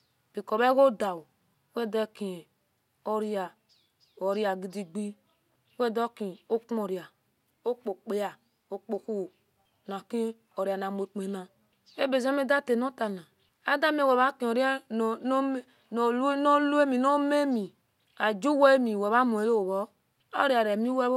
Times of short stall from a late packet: none

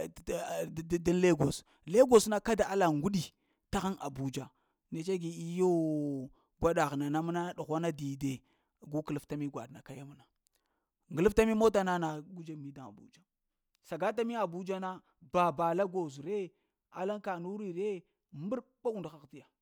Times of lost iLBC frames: none

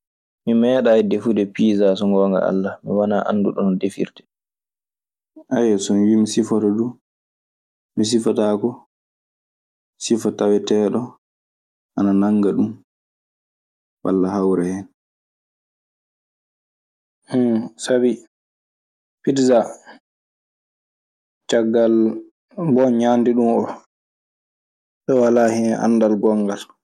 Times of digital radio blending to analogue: none

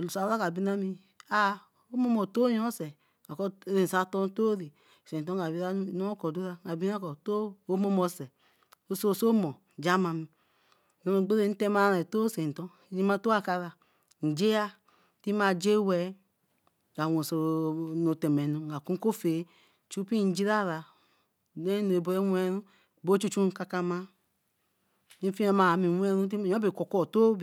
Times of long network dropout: none

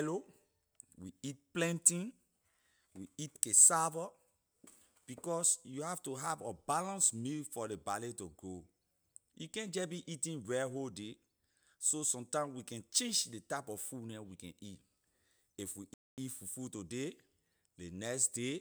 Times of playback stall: 15.94-16.18

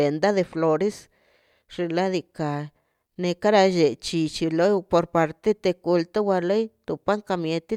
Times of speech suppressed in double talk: none

